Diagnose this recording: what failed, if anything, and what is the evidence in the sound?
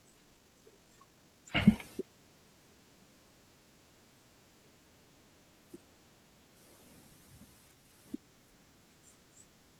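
Software in the processing stage likely squeezed the opening of the speech to fit a length, dropping short slices to hold pitch. This time-stretched section runs from 0.0 to 1.78 s at 1.67 times normal pace, sounding rushed before the pace abruptly settles.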